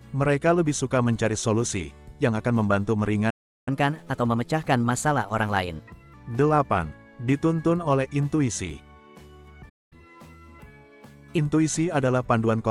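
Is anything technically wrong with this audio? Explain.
Yes. A playback stall, likely from the player running out of data, cuts the sound to silence from 3.30 to 3.68 s (about 370 ms) and from 9.69 to 9.93 s (about 220 ms). Each time it resumes mid-flow. Each stall is followed by catch-up at higher speed: the player resamples its backlog at 1.15 times normal speed, raising pitch by about two semitones, from 3.68 to 6.14 s and from 9.93 to 11.38 s, before settling back.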